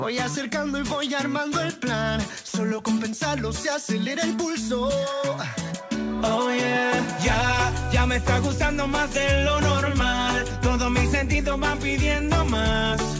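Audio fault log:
2.48–2.54 s, sound dropped by the voice detector: 60 ms of sound gives way to steady comfort noise, likely the sender's detector mistaking it for background, unlike a hard dropout's silence.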